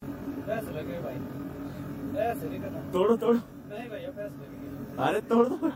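The whole clip shows channel delay (comb filtering). One channel trails the other by around 20 ms, and the mono sum cancels at evenly spaced frequencies. The first notch sits near 20 Hz, with more repeating every 50 Hz or so. The sound comes across rough and slightly doubled throughout.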